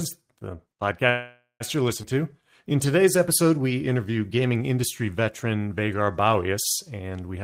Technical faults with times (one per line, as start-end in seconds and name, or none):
1.09-1.63 call audio freeze
2.02-2.06 skip ahead
2.14-3.76 jitter buffer slow-down